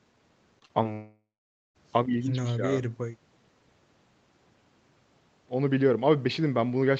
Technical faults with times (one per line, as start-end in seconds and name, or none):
0.59-0.87 short concealed packet loss
0.93-1.77 long network dropout